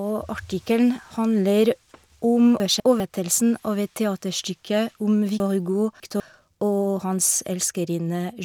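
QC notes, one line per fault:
2.6–3.0 s: chunks out of order. Two 200 ms pieces of speech swap places, so the later one plays first. Nothing is missing. The reversed order makes the moment sound jumbled, with three hard joins.
5.4–6.2 s: chunks out of order. A 200 ms chunk plays three chunks late, after the 600 ms of speech that should follow it. The 0.8 s span sounds garbled, with three abrupt joins.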